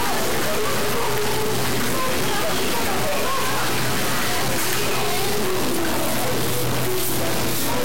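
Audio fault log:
Throughout, low bit depth without dither: everything has a coarse, grainy crunch that rides along with the sound and changes shape as it does. Quiet stretches break up into sputter or fall out to silence between steps. The distortion sits only about 10 dB under the sound, so it's hard to miss. That points to around 3 bits, likely truncated with no dither, so the error follows the signal instead of becoming a steady hiss.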